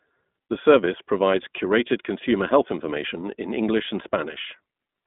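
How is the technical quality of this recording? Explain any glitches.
The quality is limited by narrowband low-bitrate coding, which is plainly audible for the whole clip.

The iLBC codec damage runs from start to finish. Nothing above 3.8 kHz survives, and the line band sits at roughly 200 Hz to 3.6 kHz, so the speech is thin and muffled. Each short frame's excitation is coded on its own, and the frame rhythm points to 20 ms frames, consistent with the 15.2 kbps mode. The speech stays clear but sounds rough and synthetic.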